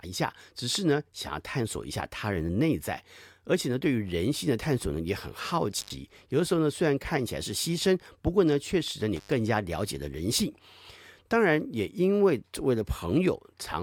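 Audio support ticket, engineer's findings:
Intermittent contact in the speech signal path. Two dropouts: 5.79–5.93 s and 9.16–9.32 s, line open about 94 ms and 98 ms. Crackle at each edge, faint hiss in the gaps. Probable loose cable or plug briefly breaking the connection.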